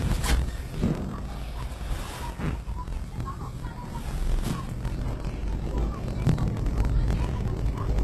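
Block size mismatch (truncated), from start to end: a steady buzz at 43.1 Hz runs under the whole sound, and everything plays 1.12 times fast while keeping about its normal pitch. One stage is passing along longer blocks than the next stage takes in, so the tail of every block is discarded. Each cut leaves a seam, and those seams repeat at the block rate to form the buzz. The rate points to a 1024-sample read. Dropping material without resampling shortens the timeline and leaves pitch alone.

Transcoding between lossy codecs, also throughout: nothing is present above 12.3 kHz, and two different kinds of coding damage are audible together. This points to a low-rate HE-AAC encode, around 16 kbit/s, that was likely re-encoded afterwards as WMA near 96 kbit/s. The second encoder's larger bit budget cannot restore what the first removed. It spends bits reproducing the earlier artefacts and adds its own, and the earliest, lowest cut-off remains.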